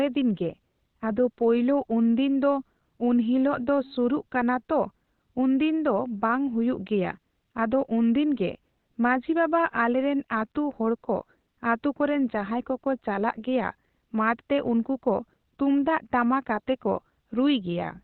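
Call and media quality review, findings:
Speech muffled and hoarse throughout. Nothing above 4.2 kHz. Heavy codec damage. Likely Opus compression in SILK speech mode, narrowband. The sound fits a low bitrate near 12 kbps, where the encoder narrows bandwidth and models the signal coarsely.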